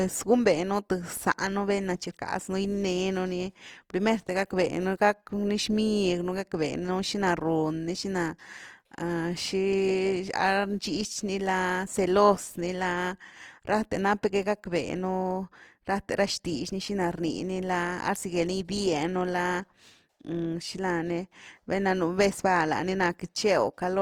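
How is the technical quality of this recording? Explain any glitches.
The recording carries audible damage from lossy coding throughout, most likely Opus compression running in its music-oriented CELT mode with too few bits. That coder keeps each band's energy but, when starved, fills bands by folding in lower ones or with noise, which here fits a rate near 24 kbps. Bandwidth stays full, reaching about 20.2 kHz, so the speech isn't muffled. Instead, its tonal parts turn rough, grainy and noisy from start to finish.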